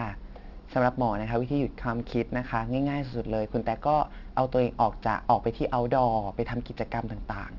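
Aliasing runs throughout: unfiltered downsampling, fitting a 12 kHz rate, folds highs back below 6 kHz, making sibilants gritty. A spectrogram shows mirrored energy crowding the 6 kHz edge.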